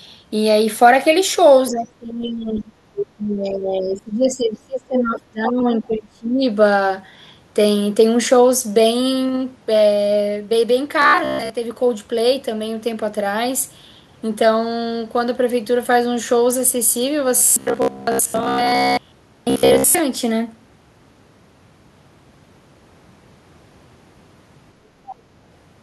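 From 1.7 to 2.68 s the talker's speech drops away, by about 20 dB at its deepest. It returns, then sinks again from 3.17 to 6.5 s, this time by about 25 dB. This is speech suppressed in double talk. Both ends were likely speaking at once. The echo canceller could not tell the near talker from the loudspeaker's echo. So it turned everything down, and the voice thins and fades for around four seconds in all.

Between those two dips, at 2.96 to 3.06 s, a brief scrap of another voice slips in. It sits only about 5 dB below the talker. This is the other side's voice leaking through. The far end was likely played on a loudspeaker and picked up again by the microphone. The echo canceller left this piece behind. A second, much fainter leak appears from 25.07 to 25.16 s, about 20 dB down.

From 11.02 to 11.5 s, and again from 17.37 to 19.99 s, the voice turns rigid and metallic. A steady buzz near 67 Hz sits under it. 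This is robotic sound from repeated short buffers. Fresh audio was likely arriving too slowly. The gaps were filled by replaying the last short slice, around 15 ms long. About seventy percent of the sound is repeated. That repetition stamps its own fixed pitch on the speech.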